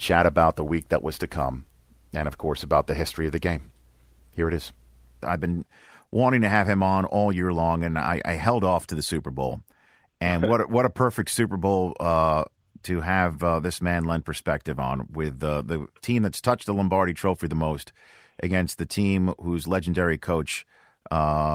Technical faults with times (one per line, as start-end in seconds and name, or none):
none